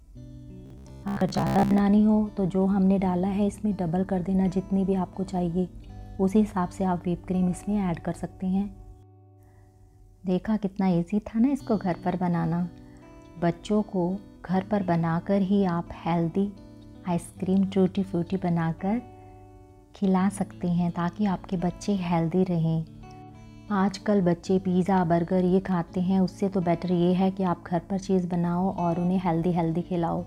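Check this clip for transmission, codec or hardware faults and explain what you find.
There's one fault, early on. From 0.66 to 1.80 s you get robotic sound from repeated short buffers: a stiff, metallic buzz at about 66.8 Hz. That fits a roughly 15 ms chunk being replayed for most of that stretch, likely because fresh audio was arriving too slowly.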